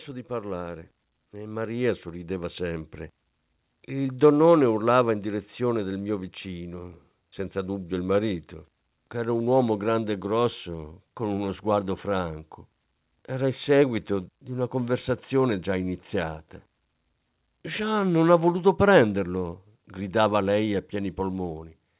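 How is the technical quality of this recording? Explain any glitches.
The recording has two level glitches near the start, both from automatic gain control, heard through a call line whose audio stops at 4 kHz, which fits G.711 A-law narrowband telephony.

Automatic gain rising, 0.27 to 2.97 s: the gain control judged the incoming speech too quiet and pushed its gain up by about 10 dB over nearly three seconds. Voice and background swell together, so the opening sounds as if it slowly gets louder.

Automatic gain falling, 4.18 to 5.15 s: now judging the input too loud, or its background too strong, the gain control pulled its gain back by about 3 dB over roughly a second. The speech and its background sink together in a gentle dip, settling just before "in direzione del mio".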